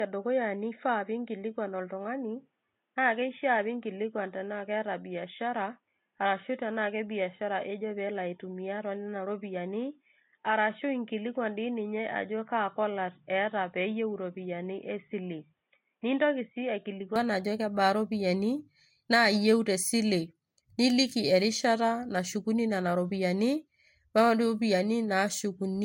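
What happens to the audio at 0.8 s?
At 0.8 s the speech is inside a stretch, from 0.0 to 17.16 s, that was likely recorded through an input switched to a poorer device. That device passes nothing above 3.8 kHz, so the speech sounds dull and boxy, a little quieter, and carries a faint new noise floor. A spectrogram shows a hard ceiling at 3.8 kHz until the fuller band returns at 17.16 s with no gap.

Throughout the clip, this moment included, the speech also shows transcoding between lossy codecs, likely from one codec followed by MP3. The smeared, swirly artefacts of the first codec blend with MP3's own. A spectrogram shows a patchy upper band and a cut-off at 16.6 kHz, which is hidden here under the 3.8 kHz limit.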